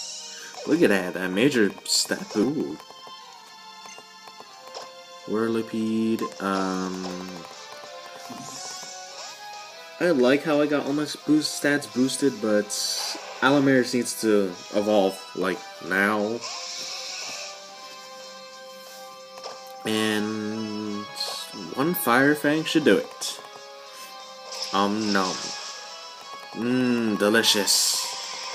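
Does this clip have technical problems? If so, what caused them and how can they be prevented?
Yes. Skip ahead at 2.43–2.45 s: about 0.7 s of audio was dropped and playback jumped forward, joining the two sides almost directly with no gap. Preventing it means sizing the jitter buffer and network path so late audio isn't discarded when the buffer overflows.

Jitter buffer speed-up from 2.53 to 4.46 s: after that backlog, the receiver repeatedly cut short pitch-period pieces, about 0.3 s in total, so the sound runs at 113% speed with unchanged pitch. Steadier packet delivery, so that delayed packets don't arrive in bursts, would avoid the need for this catch-up.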